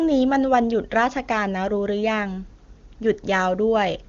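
Speech carried over the AMR wideband (HD Voice) codec at what sounds like its top rate, around 23.85 kbit/s, with no audible faults.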